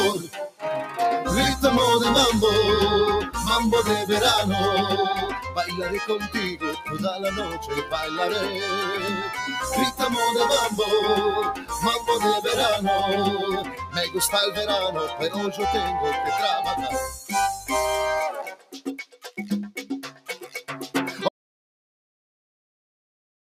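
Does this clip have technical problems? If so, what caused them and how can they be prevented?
Yes. Across the whole clip the sound pumps and thins, with sustained parts and tails sinking while attacks come through. That is a noise suppressor applied to music or sounds. A processor tuned for speech is treating steady tones and ambience as noise and swinging the level by around 10 dB as it reacts. To prevent it, bypass speech noise suppression whenever the source is anything other than talking.

The suppressor cuts certain sounds deeply, so they sag or have their decays clipped short at 0.23–0.98 s, 6.23–7.93 s, 11.55–12.08 s, 13.61–13.97 s, 15.07–15.6 s, 17.09–17.71 s, 18.31–19.38 s and 20.07–20.62 s. The drops reach about 14 dB at 0.23 s, 18.31 s and 20.07 s, and about 13 dB at 6.23 s and 11.55 s. These are sound cut by the noise suppressor, where held or fading material was judged to be noise and pulled down harder than the rest. 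Turning the suppressor off, or lowering its strength, prevents this.

At 21.29 s the audio stops dead and stays in silence, with no room tone, through to the end. This is an audio dropout to silence, likely caused by the input being lost, through a disconnected device, a failed link or an accidental mute, while recording carried on writing silence. Securing connections, watching input meters and checking mute states before and during capture prevents it.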